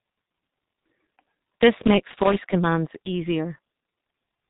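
G.723.1 codec damage runs through the whole speech clip, and it is heavy. This early internet-telephony coder works on 30 ms frames, here in its 6.3 kbit/s mode. Nothing above about 3.8 kHz survives, so the speech is muffled and dull. Because the coder's model of the voice changes only once per frame, it lags behind quick articulation, leaving a hoarse roughness and smeared consonants.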